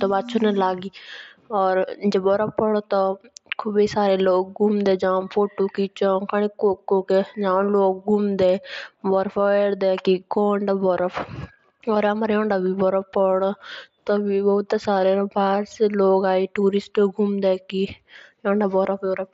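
No technical faults are audible anywhere in the recording.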